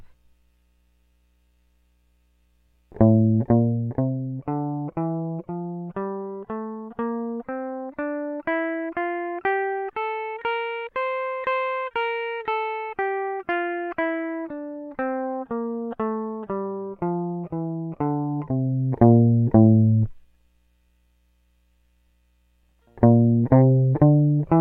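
No technical faults can be heard in this music. The level rises and falls smoothly in places, like a fader being moved, which is deliberate mixing rather than a fault.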